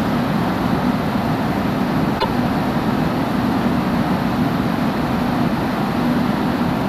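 At 2.16 s a brief burst of damaged data in a compressed stream cuts into the sound. It lasts until 2.25 s, under a tenth of a second. Part of the encoded stream is corrupt at this point. The decoder cannot read those frames properly. It loses its place and hunts for the next valid frame header. What comes out is a short chirp, squawk, click or hole. Normal decoding then picks up again.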